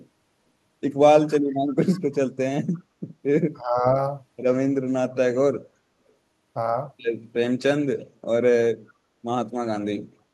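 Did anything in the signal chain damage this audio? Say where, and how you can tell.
Yes. The damage is in call processing, in the echo canceller stage.

Speech suppressed in double talk appears twice. From 1.2 to 1.58 s the speech sinks by as much as about 25 dB. From 3.58 to 3.85 s it dips by about 15 dB. Each dip affects roughly 0.3 s of audio. The likely cause is a canceller that saw both ends active at once and attenuated the near talker together with the echo.

There is also echo leak. Faint delayed copies of the speech come through at 1.68 to 1.72 s, 1.92 to 2.01 s and 2.74 to 2.8 s. Each one trails the original by 336 ms. The first two sit about 30 dB below the speech, and the third sits about 35 dB below. The copies are short, which points to residual loudspeaker pickup that the canceller's adaptive filter failed to subtract. Because the delay is constant, the fragments probably come from one acoustic loop.

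Background gated by the echo canceller occurs from 5.76 to 5.87 s. The room noise drops by 17 dB for about 100 ms and then returns at its previous level. It is a hard dip in the noise floor, not a change in the speech. The canceller clamped the microphone while far-end audio was playing and then released it.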